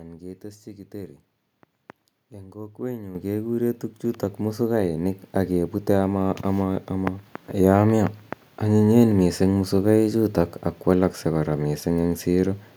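At 3.15 s there's a clear microphone volume step-up: the whole speech signal jumps by about 9 dB in one go. What's happening is the call software decided the mic input was too quiet and bumped the device's input volume in a single move rather than easing it up. You can tell it's gain, not the talker getting louder, because the room noise underneath rises by the same amount at the same instant.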